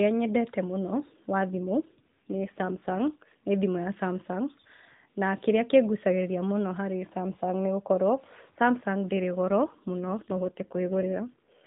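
From the start to 6.03 s there is a block size mismatch (truncated): one stage writes longer blocks than the next reads, and each block's tail is discarded. This produces a steady buzz at about 91.9 Hz, with speech running at essentially normal speed and pitch. A spectrogram shows vertical discontinuity lines spaced about 10.9 ms apart, and the waveform shows small regular jumps.

Two AMR rate drops occur, from 1.54 to 3.36 s and from 9.50 to 11.67 s. In each, the speech turns rougher and more synthetic, which fits the codec switching from its 12.2 kbit/s mode to about 5.9 kbit/s. The band still stops at 4 kHz, as the narrowband mobile codec always does here, with no gap. On a spectrogram, the harmonics look smeared and the upper formants look patchier.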